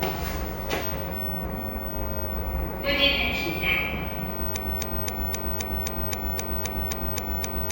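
From 4.56 s to the end, a broken-record loop takes over: a 0.26 s fragment repeats exactly, back to back, about twelve times, replacing the audio that should follow. A stalled player or stream is the likely cause. Waveform and spectrogram show identical blocks tiling at a fixed period.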